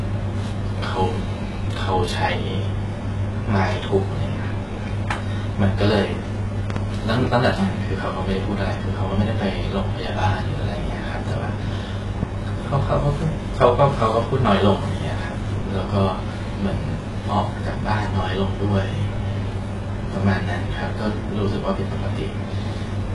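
Throughout the speech, the treble stops at 11.4 kHz and sibilants sound gritty and metallic. The likely cause is heavy HE-AAC compression, which fits a bitrate near 12 kbps. Upper bands are rebuilt from copied lower ones, so their harmonics misalign with the true spectrum.

From 6.70 to 6.79 s, a loud pop arrives as two sharp clicks, far above the speech level, while the speech carries on underneath. A single, somewhat weaker pop follows at 12.23 to 12.25 s. Both likely come from voltage spikes, such as a plug, a switch or static discharge.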